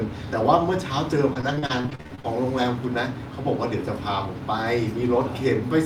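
Repeated packet loss (robotic sound) runs from 1.29 to 2.25 s. Over this span the stream drops out again and again, around a dozen times, with no gap longer than 45 ms. Each hole is bridged by extending the preceding sound, about 360 ms in total, which covers 37% of the span. Another 340 ms is simply missing. The speech turns choppy, with pieces missing and some of it roughly rebuilt rather than heard.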